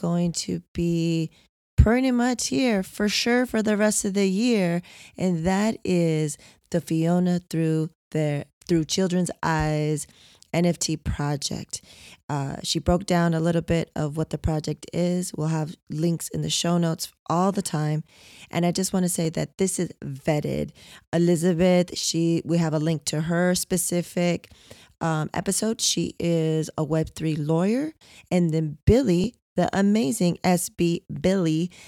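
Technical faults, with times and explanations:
9.26, 19.25 and 29.24 s, audio missing between chunks: three tiny skips of roughly 10 ms each, after "through their through" and before "that this is vetted" and "the amazing". The 10-second spacing likely points to a chunked recorder dropping audio at each handover.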